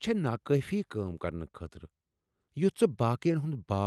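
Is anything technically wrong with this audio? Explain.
Yes. Two related timing faults run through this speech clip.

Clock drift between sender and receiver affects the whole clip. The sender's clock runs slow, by roughly 3 percent, so audio arrives a little too slowly for the receiver's playback rate. The jitter buffer keeps draining, and the receiver has to patch the shortfall. The result is a faintly unsteady pace rather than any single obvious glitch. On a waveform, the overall envelope looks normal but is slightly stretched in places.

Repeated timing corrections run from 0.16 s to 3.77 s. To keep up with the slow sender, the receiver repeats short pieces of audio at uneven intervals, all in the same direction. Over that stretch the effective speed is about 96 percent, and it adds around 150 ms in total. The sound has small hiccups and a slightly dragging tempo. On a spectrogram, look for brief repeated slices where harmonic patterns recur. 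On the waveform, look for tiny duplicated cycles at the splice points.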